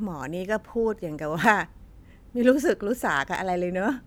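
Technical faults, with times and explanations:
1.44–1.52 s, loud pop: a double pop, two sharp hits around 15 dB above the speech, which carries on underneath. That's the sound of a sudden voltage jolt riding on the signal, likely a plug, switch or static discharge.
3.35–3.37 s, loud pop: a single, shorter pop, about 10 dB over the speech, likely from the same kind of electrical step.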